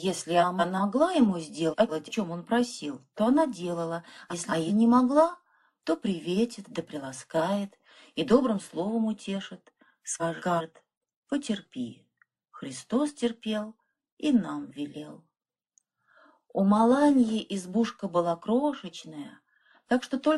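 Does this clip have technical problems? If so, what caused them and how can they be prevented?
Yes. Frames out of order occur at 0.40–0.81, 1.70–2.11, 4.30–4.70 and 10.20–10.61 s. Each time, two neighbouring 186 ms blocks play swapped, which gives a garbled flutter. To prevent it, buffer incoming packets and reorder them by sequence number before decoding.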